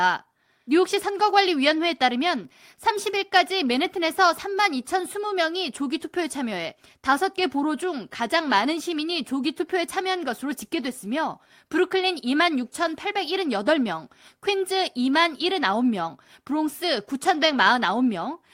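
No technical faults can be heard at any point in the recording, and the signal stays intact and uninterrupted throughout.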